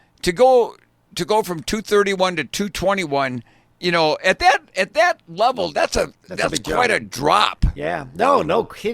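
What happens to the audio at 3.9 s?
Nothing goes wrong at 3.9 s; the speech carries on intact through that moment, with no dropout, click or distortion.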